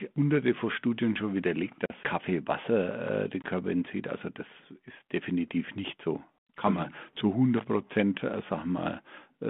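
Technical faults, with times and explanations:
1.86 to 1.92 s and 3.42 to 3.44 s, packet loss on an ADPCM call: after "schon widerlegt" a 40 ms hole, roughly two packets' worth, and after "äh den" a 20 ms hole, each cut to silence. The 32 kbit/s G.726 decoder's predictor and step size lose track of the sender's, so the speech comes back slightly distorted before settling.
7.58 to 7.64 s, loose connector crackle: just after "man mhm zu" a short irregular burst of scratchy crackle lasting about 65 ms. A worn or dirty contact is rapidly making and breaking, chopping the signal on and off, with pops as any DC on the line jumps.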